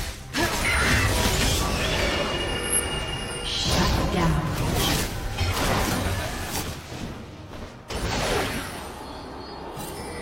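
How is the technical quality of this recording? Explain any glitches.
The recording has one clear glitch. Repeated frames occur between 2.60 and 2.80 s. A short stretch of the compressed stream was delivered more than once, so the decoder played the same slice of sound again instead of moving on. The repeated block is about 93 ms long, which fits a pair of codec frames, and it is played two extra times. The result is a brief stutter, and the recording runs about 186 ms longer than it should.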